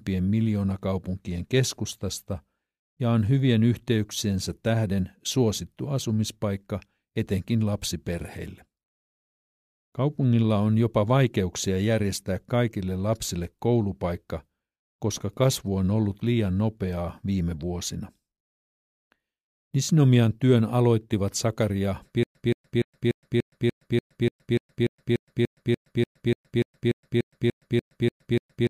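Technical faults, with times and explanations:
22.23 s to the end, stutter with silent gaps: the same 174 ms fragment of speech repeats 22 times, each followed by 118 ms of dead silence, a steady 293 ms cycle. Likely a stalled stream replaying its last fragment at each retry, so the following speech is lost.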